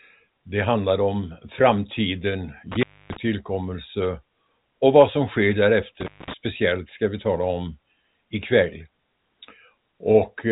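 Intermittent contact at 2.72–3.17 s and 6.01–6.34 s: a loose connection briefly opens, dropping the speech for about 270 ms, then 220 ms, with crackle at each edge.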